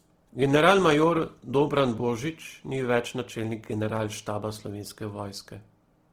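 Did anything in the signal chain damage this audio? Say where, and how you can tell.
Yes. The damage is at the codec stage, across the whole speech clip. The sound is plainly grainy, rough and noisy. Content reaches about 20.3 kHz. This is likely Opus compression in music mode, near 16 kbps, filling starved bands with folded copies or noise.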